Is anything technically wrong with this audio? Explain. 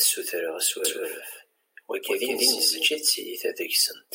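Yes, there's a doubled audio track from 0.85 to 2.87 s. A second copy of the speech trails the original by about 200 ms at roughly the same level, with no decay or room colour. It's likely captured twice via a slower path, and it cuts in and out abruptly.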